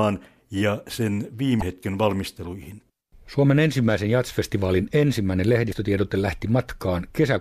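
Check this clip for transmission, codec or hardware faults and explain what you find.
The speech has two brief faults, both from damaged data in a compressed stream: one from 1.58 to 1.63 s and another from 5.68 to 5.73 s, each about 44 ms long. At those points corrupted bytes reach the decoder, which misreads the affected frames, loses sync and hunts for the next valid frame header. Each is heard as a short chirp, squawk, click or short hole cutting across the speech. On a spectrogram each shows as a brief, narrow disturbance, and the waveform shows an abrupt, jagged discontinuity.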